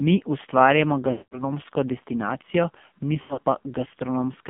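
Speech passed through the AMR narrowband mobile codec at a low rate, consistent with about 5.9 kbps. This confines it to a phone band of roughly 150 Hz to 3.5 kHz, strips everything above, and leaves the voice heavily buzzy and synthetic throughout. Lost AMR speech frames then cause two dropouts. From 1.12 to 1.45 s, about 200 ms of frames fail, and the decoder stretches the last good sound before fading it to silence. From 3.22 to 3.39 s, about 120 ms of scattered losses, with the longest gap 80 ms, produce brief warbling dips.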